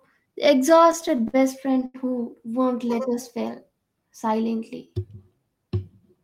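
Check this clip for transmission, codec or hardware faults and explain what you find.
One fault is present. From 0.69 to 1.96 s, just before "who won't", the speech shows repeated stalls (stutter). Packets arrived late, so the jitter buffer kept emptying. Twelve short gaps, the longest 82 ms, were filled by stretching sound, making it drag and stutter.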